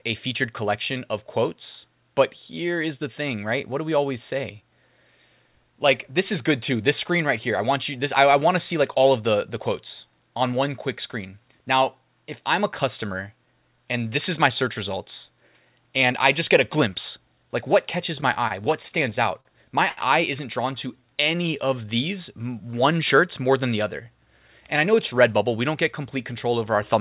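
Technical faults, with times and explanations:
18.16–19.48 s, repeated stalls (stutter): the speech halts and restarts about ten times in just over a second, with nothing lost. Packets were reaching the receiver later than they were being played, so its jitter buffer kept running dry. Each time, the receiver held on the last sound until data arrived, filling 170 ms in all, about 13% of the stretch, with the longest hold lasting 45 ms. That is why the passage drags and stutters.
19.89–20.00 s, short stall from a late packet: one sound is held for 80 ms longer than it should be. A single packet missed its playout time, the buffer emptied, and the receiver stretched what it already had until the packet turned up. Playback then resumed from exactly where it stopped, so no audio is missing. The overall delay also rose by 80 ms, and the held sound carries a faint buzzy, flattened quality.
20.88–22.18 s, jitter buffer slow-down: this stretch plays at about 91% speed while the pitch stays put, so the sounds are drawn out. 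Running low or having just raised its target delay, the receiver rebuilt its reserve by repeating single pitch periods and small slices of pause over and over, adding 130 ms of audio in total. The repeated cycles cause the slowed character. Across the clip, the band stops at 4 kHz, which fits a 64 kbps G.711 call path.
24.17–25.51 s, jitter buffer speed-up: here the speech runs at about 110% speed at unchanged pitch and sounds hurried. The buffer had built up more audio than its target, so the receiver trimmed its backlog by cutting out short pieces a pitch period or so long, many times in succession. Roughly 150 ms was removed in total. Because the pitch is untouched, the result sounds rushed rather than chipmunk-like.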